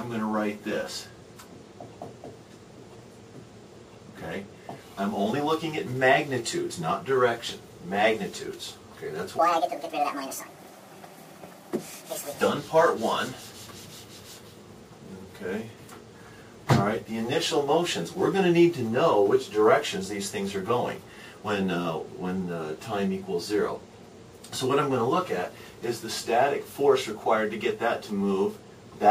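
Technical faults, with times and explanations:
9.39–12.41 s, section at the wrong speed: the sound suddenly runs 1.66 times too fast, rising roughly ten semitones and hurrying, likely from being played against the wrong clock. On a spectrogram every harmonic jumps upward at once, and the waveform looks squeezed in time.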